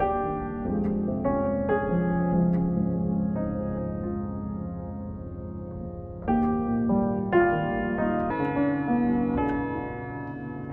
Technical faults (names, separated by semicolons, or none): wrong sample rate